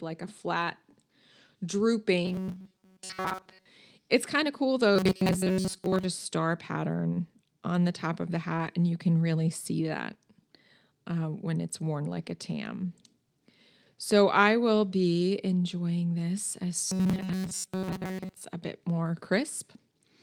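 From 2.25 to 3.66 s, the speech turns into a rigid, metallic buzz. It returns from 4.96 to 6.05 s and again from 16.87 to 18.44 s. This is robotic sound from repeated short buffers. The likely cause is audio arriving too seldom, so the player loops its last fragment while fresh audio is dropped. Most of the sound in these stretches is repetition. The buzz sits at 188 Hz, which fits a loop of about 5.3 ms.

Inside the last buzzing stretch, from 17.23 to 17.29 s, there is a lost packet rebuilt from error correction. There is no gap. Instead, the decoder plays a low-bitrate copy carried in the following packet. About 40 ms is rebuilt, which points to two lost packets. The patch sounds rougher and noisier than its surroundings.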